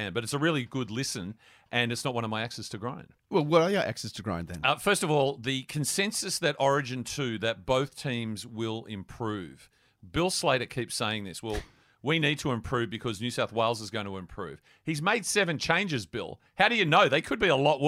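No technical faults are audible anywhere in the speech recording.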